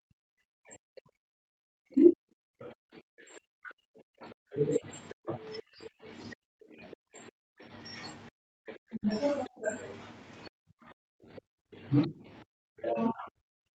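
From the start to 7.72 s the talker's speech is pushed down hard, at its deepest by around 40 dB, for most of that stretch. This is speech suppressed in double talk. The likely cause is an echo canceller that confused the talker with loudspeaker echo while both sides spoke. Brief scraps of the other side's voice leak through at 5.09 to 5.14 s and 6.92 to 6.96 s, roughly 20 to 25 dB under the speech. The canceller likely left some loudspeaker sound in the microphone. The speech sinks again from 8.29 to 9.09 s. Another faint leak comes at 9.45 to 9.49 s. A shorter dip of around 30 dB follows from 9.48 to 9.7 s. From 10.49 s to the end the speech stays suppressed, again by around 40 dB. Throughout, the Opus call path limits the audio to 8 kHz.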